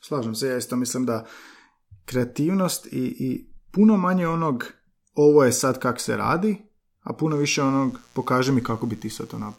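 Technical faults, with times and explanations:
7.28 to 9.58 s, mains buzz: A steady, raspy buzz enters at 7.28 s and runs to the end of the clip. It sits faint, roughly 35 dB below the speech. Its harmonics fall on multiples of 60 Hz, so it comes from 60 Hz mains power. Sharp switching spikes leak in twice per mains cycle, 120 times a second. Spikes that abrupt carry harmonics up into the kilohertz range. That upper energy gives the buzz its rasp instead of a soft hum.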